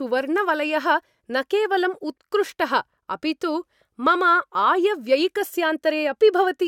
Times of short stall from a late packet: none

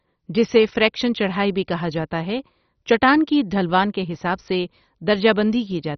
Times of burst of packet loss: none

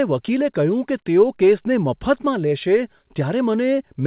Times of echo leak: none

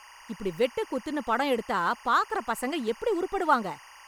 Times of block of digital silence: none

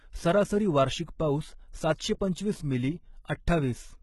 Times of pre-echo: 1.97-2.00

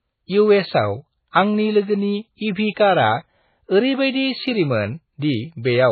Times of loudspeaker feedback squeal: none

